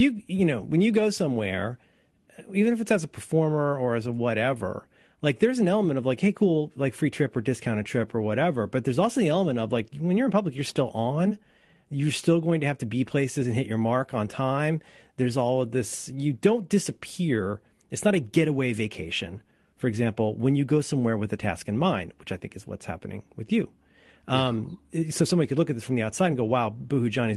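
Speech recording; no technical faults are audible here.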